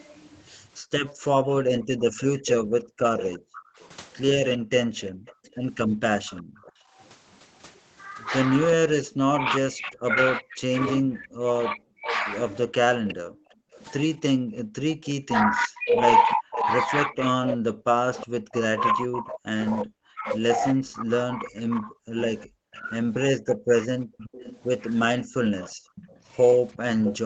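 A speech recording from a call, with three kinds of echo-canceller trouble. An echo leak is the likely cause of a delayed copy of the speech: the far end's canceller let part of its loudspeaker signal back through the microphone. That copy trails the voice by 363 ms at about 10 dB below it, from 1.5 to 6.71 s and again from 12.1 s to the end. The canceller also clamped the microphone hard while its loudspeaker played, so the background is gated by the echo canceller and dips by up to about 40 dB. This happens across 1.78 to 6.98 s (roughly a second and a half of dips in all), 13.05 to 13.72 s (about half a second) and 24.04 to 25.95 s (brief dips, around 150 ms). When both sides likely talked at once, the canceller could not tell its talker from the echo and turned both down, so speech is suppressed in double talk, with the voice dropping by up to around 40 dB. This happens in short bites totalling about 150 ms between 2.91 and 4.72 s, and repeatedly from 8.75 s to the end. 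All of this sits within the 8 kHz bandwidth of the Opus call path.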